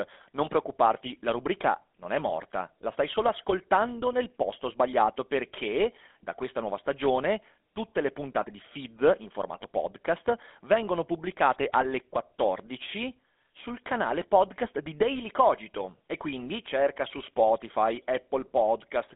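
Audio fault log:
Throughout: GSM full-rate codec. The speech is squeezed into a phone-line band of about 250 Hz to 3.5 kHz, with nothing at all above 3.7 kHz, and carries a plainly audible buzzy, gravelly roughness. The coder rebuilds each voice from a vocal-tract model driven by a sparse, regularly spaced pulse train, which fits a rate around 13 kbps. That grainy buzz is what sets it apart from a plain band-limited telephone filter, which dulls the sound without adding texture.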